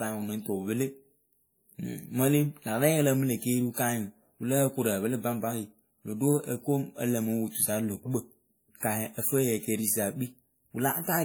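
Right through the speech there's the smeared, swirly texture of a heavily squeezed codec, even though content reaches 20.2 kHz. It's likely low-bitrate audio saved at a high bitrate: a 48 kbit/s WMA pass re-encoded as 192 kbit/s MP3, keeping the damage.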